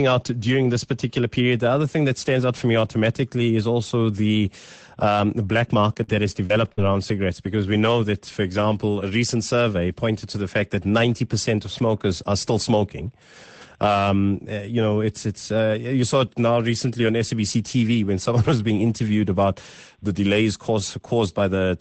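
From 5.93 to 6.79 s, after "the um the black", packets went missing four times, the longest gap 45 ms. Each gap was filled by stretching the sound before it. This repeated packet loss makes a choppy stretch with pieces missing before "around cigarettes because we".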